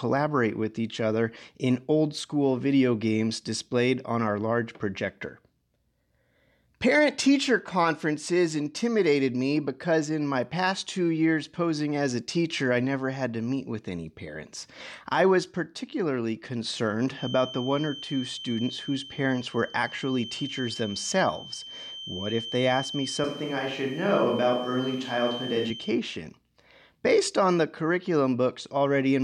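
From 17.11 s to 26.01 s a thin, steady whistle at 3.1 kHz sits behind the speech, swelling and fading slowly in strength and staying roughly 15 dB below it. This feedback whistle is most likely a loudspeaker-to-microphone loop held just at the edge of oscillation, so a single frequency rings on without building up. On a spectrogram it shows as one unbroken horizontal line at 3.1 kHz running through gaps and syllables alike. On the waveform it adds a faint fuzz that fills the pauses.

While the whistle is still present, at 23.24 s the speech abruptly turns roomy and hollow with thinner bass, then snaps back at 25.70 s. The loudness barely changes, and a faint room noise, far below the speech, appears under it. This is a switch to a distant microphone, likely because the close microphone's feed dropped and a farther pickup took over for those seconds. A spectrogram shows weaker low-frequency energy and reverberant smearing after each syllable, with clean vertical edges at both switch points. 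The waveform's envelope looks blurrier there, with decay tails that reach into the gaps between syllables.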